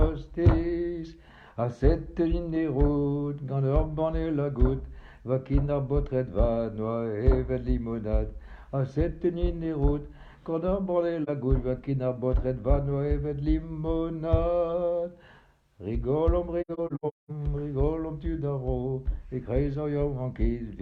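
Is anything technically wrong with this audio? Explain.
Yes. There is AAC frame loss with muting. At 11.23 to 11.29 s a single lost frame of about 43 ms, roughly one frame's worth, causes a brief dip in the sound. From 16.61 to 17.30 s a cluster of holes totalling about 470 ms is scattered across that span, the longest around a fifth of a second. The decoder zeroes the missing frames' spectrum, and the overlapping windows fade the sound out and back in, so the gaps have soft edges. On a spectrogram they show as full-band blank columns; the waveform tapers to silence and recovers smoothly.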